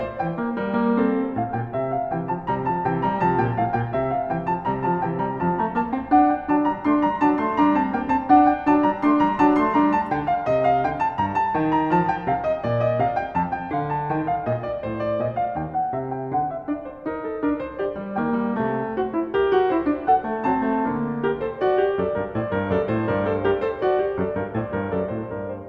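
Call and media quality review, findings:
No faults found: the music signal shows no dropouts, timing irregularities or playback-path disturbances that would need a ticket.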